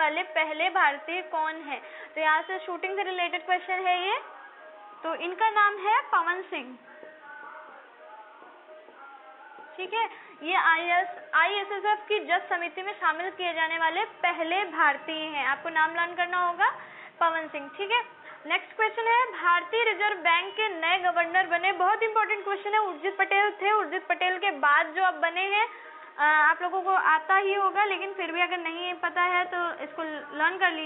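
No technical faults can be heard in this audio.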